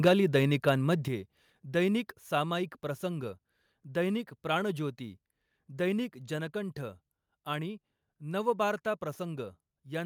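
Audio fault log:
0.06–0.36 s, microphone overload: The opening syllables come in hot, pushing about 5 dB past what the converter can handle, so their peaks get sheared flat. Only a small slice of the samples is actually clipped, around one and a half percent, but that flattening adds a gritty, crackly edge on the loudest bits. The likely cause is the microphone input gain being set too high for this talker.
0.08 s and 1.08 s, microphone volume stepped down: Right after the overload starts, the level drops abruptly by about 3 dB, and a second later it drops again by about 6 dB. The voice and the room tone both drop together, which is why it sounds like someone turning a knob rather than the talker backing off. These are likely the call software's automatic gain control reacting to the clipping and cutting the device input in two steps.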